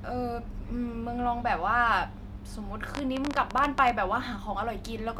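Speech, where likely interference or a faltering interface injects a train of clicks from 2.95 to 3.91 s: about fifteen uneven ticks near 16 per second, roughly 15 dB above the speech.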